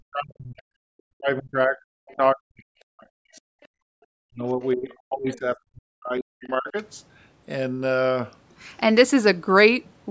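It's a speech clip with echo-canceller trouble right through the first seven seconds. From 0.0 to 0.72 s, again from 0.95 to 3.4 s, and once more from 4.15 to 6.76 s, the talker's voice sinks by as much as about 40 dB in places. It ducks and breaks up for roughly 0.7 s in the first stretch and around 2 s in each of the other two. That's speech suppressed in double talk, most likely because both ends were talking at once. With both voices arriving together, the canceller couldn't tell the near talker apart from its own loudspeaker echo, so it pulled everything down. At 3.61 to 3.68 s there's a brief scrap of the other side's voice leaking through, very faint at around 35 dB under the talker. That's likely loudspeaker playback the canceller didn't fully strip out of the mic signal, and at that level it's little more than a short ghost. Right after it, from 3.68 to 3.87 s, the room tone drops out by about 40 dB for roughly 0.2 s and then comes back. 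That's the background gated by the echo canceller: it clamped the microphone hard while the far end was playing and let go a moment later. The call microphone processing itself is doing its normal job, and the band stops at 8 kHz, which fits a 16 kHz call path.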